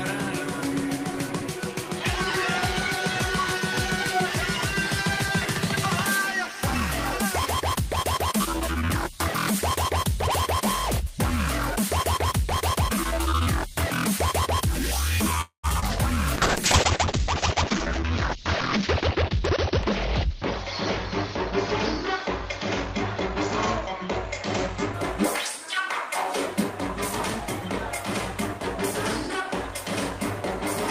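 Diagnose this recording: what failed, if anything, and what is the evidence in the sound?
Network and jitter buffer: call audio freeze at 15.41–15.66 s. The last sound is stretched, then about 0.11 s of silence. Packets were likely delayed and the buffer ran dry, inserting about 0.22 s.

Network and decoder: short concealed packet loss at 15.80–15.84 s. A brief smear of audio synthesised from the preceding signal replaces about 20 ms of lost audio.

Codec: call bitrate drop from 16.37 to 25.00 s. The audio turns coarse and muffled, with the band narrowing from 20 kHz to 6 kHz. This fits an Opus rate falling from about 32 to 8 kbps, bottoming out for 2.7 s.

Jitter buffer: speed-up at 17.73–19.37 s, running 7% fast and dropping roughly 150 ms, and at 25.57–26.73 s, running 3% fast and dropping about 50 ms. In both, pitch periods are removed to cut latency, so the audio runs faster at the same pitch.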